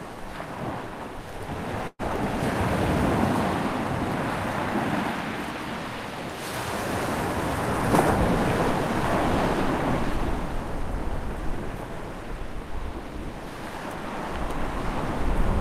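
It's a recording of everyday sounds. At 1.87 to 2.01 s there's a call audio freeze: the last bit of sound stretches into a fading buzz or hiss, going silent for its final 30 ms or so, then picks up exactly where it left off. That's likely delayed packets emptying the jitter buffer, adding 118 ms of delay without losing anything. From 10.03 to 12.40 s you get a jitter buffer speed-up: the receiver trims tiny pitch-period slices to shed backlog, so the sound runs about 4% fast at unchanged pitch, dropping about a tenth of a second overall.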